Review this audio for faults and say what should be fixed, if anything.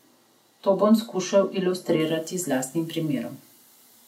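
From 0.0 to 2.0 s the speech is dull and muffled, with the top end rolled off smoothly rather than cut sharply: at 10 kHz the level sits about 10 dB below 1 kHz. This is de-emphasis applied wrongly, a treble-cut stage meant to reverse pre-emphasis acting on material that never had it, or running a second time. The brightness returns at 2.0 s, just before "z lastnim". Fix by removing that filter from the first two seconds. To prevent it, track whether pre-emphasis is actually present and apply exactly one matching de-emphasis stage.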